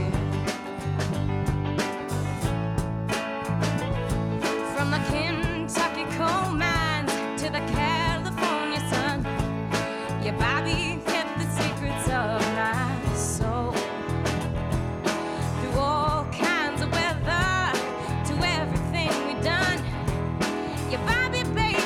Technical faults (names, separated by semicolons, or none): none